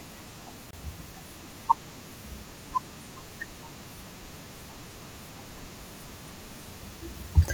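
At 0.71 s the speech drops out for about 26 ms, ending at 0.73 s: a gap at a join of encoded pieces. Separately encoded segments were butted together with their encoder delay and final-frame padding left untrimmed, producing a brief hole with smeared edges before the speech resumes where it stopped.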